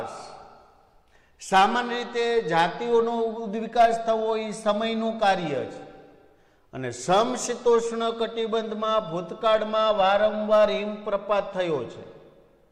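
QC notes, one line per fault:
No technical faults can be heard anywhere in the signal, which holds steady from its first moment to its last.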